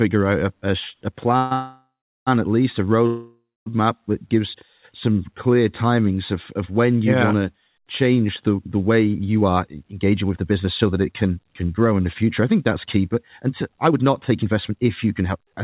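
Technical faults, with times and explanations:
1.37–2.29 s and 3.07–3.68 s, call audio freeze: after "a a" the sound stretches into a fading buzz, then about 0.38 s of silence, before "at least a" resumes; the later freeze holds 0.24 s of silence. Nothing is lost, only delayed, likely from late packets draining the jitter buffer.
9.41 s to the end, jitter buffer speed-up: from "change the the way" onward the audio runs about 13% faster at unchanged pitch and sounds hurried. The receiver trims short pitch-period pieces repeatedly, roughly 0.7 s in total, to shed a backlog of buffered audio.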